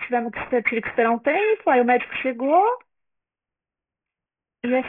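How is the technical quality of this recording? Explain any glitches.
The technical quality is poor because aliasing runs through the whole speech clip. Everything above 3 kHz has folded back down into the band, which fits a sample-rate drop to about 6 kHz with no anti-alias filter. Sibilants come out gritty and metallic, with wrong, unrelated tones only around 10 dB under the speech, and the spectrum runs hard up to that 3 kHz edge.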